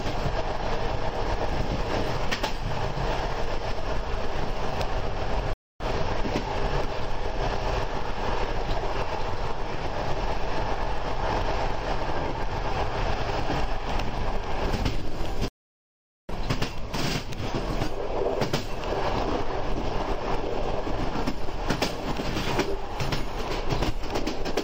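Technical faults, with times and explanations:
5.53–5.82 s and 15.48–16.30 s, stream reconnect: the connection dropped, so the player went silent for 267 ms and then 807 ms. Each time it reconnected and started a new decoder mid-stream, so the sound resumes later than where it broke off, by roughly a seventh of a second the first time and about 0.7 s the second. On the waveform, each gap is a flat line ending in a brief muted or fading onset. The spectrogram shows a blank vertical band with mismatched content on either side.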